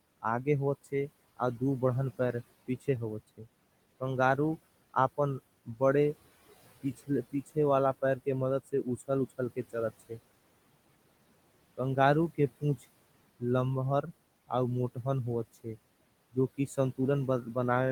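Noise suppressor artifacts run through the whole recording. The suppressor pulls down whatever bands it judges to be steady background, by about 21 dB, and the room noise, which sits about 19 dB under the speech, drops away in the gaps and swells back under each phrase. The noise itself comes and goes with the speech, which is what separates this from a plain noisy room, where the noise would hold steady.

Speech cut by the noise suppressor happens in six stretches: 0.22–4.38 s, 6.83–7.57 s, 8.17–10.19 s, 11.77–12.85 s, 14.02–15.77 s and 16.33–17.56 s. Here the suppressor mistook quiet parts of the speech for noise and turned them down along with the background, by up to about 19 dB at the deepest. Soft consonants and word endings sound swallowed. Only short pieces are hit, from around a sixth of a second to about 0.4 of a second in total per stretch. Unlike a dropout, the sound fades rather than stopping abruptly.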